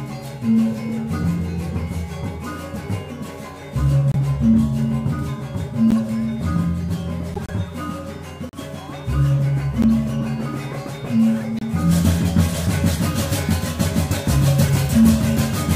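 Short chirps and noise bursts cut through the sound at 4.12–4.16, 5.90–5.95, 7.34–7.50, 8.43–8.54, 9.82–9.85, 11.58–11.62 and 14.68–14.70 s, each a corrupt frame decoded: damaged compressed frames were played anyway, spraying energy into wrong frequencies.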